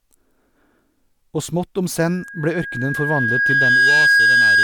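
A microphone-to-loudspeaker loop in this speech clip tips into loudspeaker feedback squeal at 2.01 s, just after "smått om": a 1.6 kHz tone swells over about two seconds to roughly 10 dB above the speech and holds until the end.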